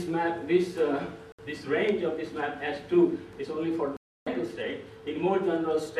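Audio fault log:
1.32 to 1.40 s and 3.97 to 4.28 s, Bluetooth dropout: the sound cuts to silence for about 80 ms, then for about 310 ms, and resumes further along, as though it kept playing through the gap. The likely cause is audio packets reaching the headphones too late and being discarded, with the longer gap pointing to a run of several lost frames. The waveform shows flat holes, and the spectrogram shows clean, full-band vertical blanks.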